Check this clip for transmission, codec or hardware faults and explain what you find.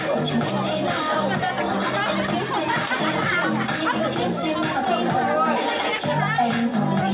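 Nothing here points to a transmission, codec or hardware fault.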